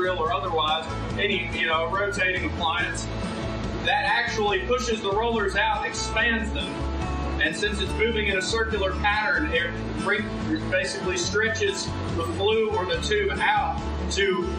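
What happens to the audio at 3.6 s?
Nothing goes wrong at 3.6 s; the audio plays through that moment intact, with no dropout, click or other fault.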